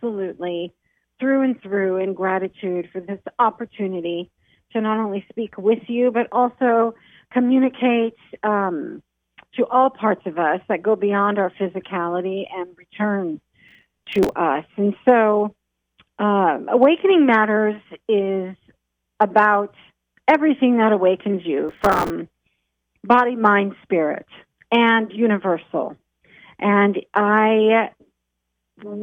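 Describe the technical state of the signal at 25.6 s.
At 25.6 s the signal is intact, with no audible fault at that moment.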